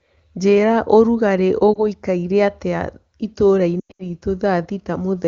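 Speech over an HD Voice call dips briefly at 1.73 to 1.81 s, then around 3.80 to 4.07 s drops toward silence and returns rough. Both are lost AMR speech frames: the decoder repeated its last good frame with falling gain, suggesting one frame first, then a scattered burst of losses.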